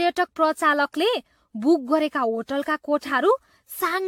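Generation loss runs through the whole speech clip, from start to finish. The sound is swirly and hollow, consonant attacks smear, and nothing is present above 18.9 kHz. This is likely the result of repeated decoding and re-encoding, about ten passes, with each pass fitting AAC-LC at around 96 kbit/s. Every pass requantises on a shifted frame grid, so spectral holes and noise accumulate beyond what that bitrate would produce in a single pass.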